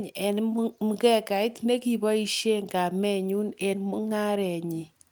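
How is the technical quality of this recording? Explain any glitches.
No glitches or faults here.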